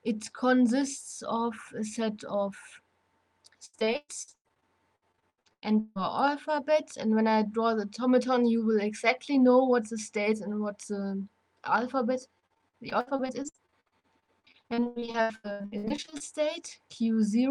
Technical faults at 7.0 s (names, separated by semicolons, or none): none